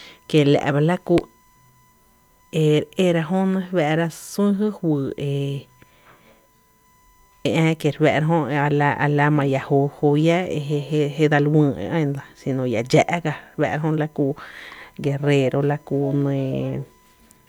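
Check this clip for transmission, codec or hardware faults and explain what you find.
There is one hardware fault: USB whine, present for the whole speech clip. A steady tone sits at 1 kHz, far below the speech, roughly 40 dB down. It comes from current drawn in 1 ms bus frames leaking through power or ground. It is heard as a thin, fixed-pitch whine.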